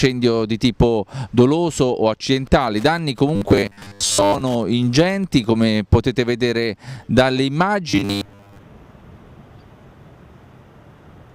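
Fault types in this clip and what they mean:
Wi-Fi interference: A nearby Wi-Fi radio's transmissions are being rectified by the audio circuit, so from 2.25 to 5.46 s a faint ticking repeats every 102.4 ms, nearly ten times a second, sitting about 30 dB below the sound.
Robotic sound from repeated short buffers: New audio likely arrives too seldom, so one short slice (around 10 ms, judging by the pitch) replaces most of the real audio. At 3.36–4.41 s and 7.89–8.62 s the sound becomes a rigid, metallic 100 Hz buzz.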